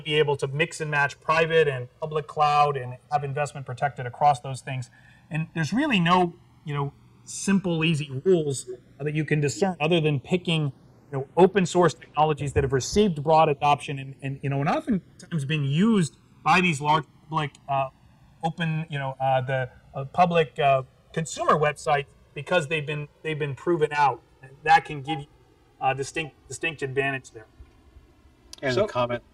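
Throughout, the channels drift apart: a clock mismatch of around 200 ppm slides the interchannel delay to roughly 3 ms, sweeping comb notches into slow flanging when summed.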